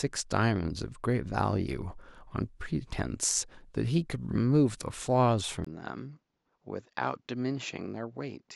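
Input switched to a poorer device at 5.65 s, likely: after a 20 ms gap, the speech runs to the end with nothing above 7.6 kHz, a few decibels quieter, duller in tone and over a faint new noise floor, as a narrower-band microphone would give.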